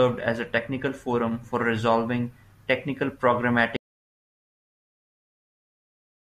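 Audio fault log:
3.77 s to end: audio dropout to silence. The speech stops abruptly mid-flow and never returns; the remaining stretch is silent, with no room tone, hiss or decay tail, so the level falls straight to nothing rather than fading. That silent gap points to the recorder still writing samples after its input went away, most likely a disconnected device, failed link or stray mute. Whatever was said after 3.77 s is not recoverable.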